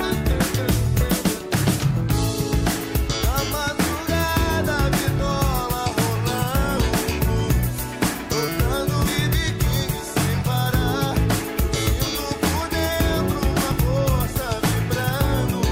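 Compressed frames are skipped at 5.19, 6.77, 7.83, 9.05 to 9.07 and 13.71 to 13.74 s. Whole 20 ms frames never play. The audio jumps ahead by a few tens of milliseconds up to about a fifth of a second.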